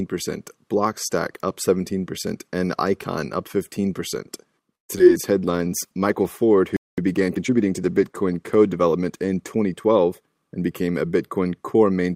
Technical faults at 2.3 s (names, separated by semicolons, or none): none